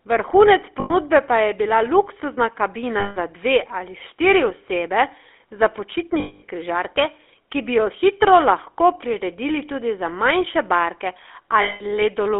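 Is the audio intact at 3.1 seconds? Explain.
No. Just after "pa je bila luksuzna", from 3.0 to 3.17 s, lost GSM frames leave a gap of about 160 ms, which fits eight lost 20 ms frames. The decoder fills it by repeating the last good frame's settings. This is heard as a rough, metallic ring. A spectrogram shows frozen, smeared horizontal bands, and the waveform shows a repetitive envelope.

The GSM full-rate codec also affects this moment, as it does the whole clip. Its vocal-tract model, driven by regularly spaced pulses, gives a plainly buzzy, gravelly roughness. The band is confined to 300 Hz to 3.5 kHz, so a spectrogram shows empty regions above and below that range, with coarse, grainy harmonics.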